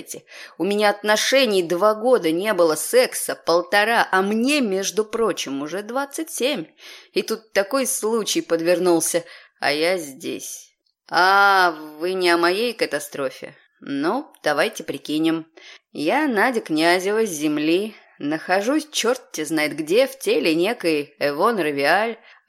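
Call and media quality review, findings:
No audible faults found; no dropouts, level anomalies or transport artefacts to attribute to any component.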